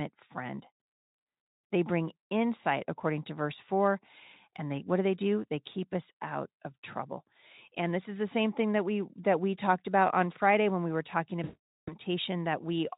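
From 11.43 to 11.95 s the speech smears into a stretched, buzzy tone or coloured noise that fades away. This is VoIP packet loss concealed by the speech codec: about 440 ms of packets went missing, and the Speex decoder kept extrapolating its last pitch and filter at falling gain.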